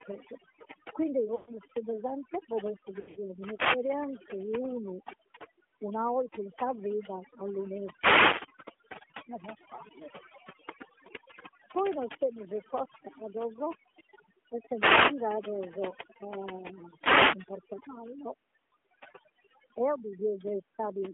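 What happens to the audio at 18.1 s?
At 18.1 s the background drops and breaks up into twinkling specks. Overdone noise removal, active for the whole clip, is cutting individual frequency bands that sit close to its noise estimate, taking quiet parts of the voice along with the noise.

The voice also has a clear buzzy, synthetic edge and a narrow telephone band, roughly 200 Hz to 3.4 kHz. That comes from the AMR narrowband mobile codec, which runs throughout and rebuilds speech from a vocal-tract model fed by sparse pulses. The plainly audible damage comes at a 10.2 kbps mode.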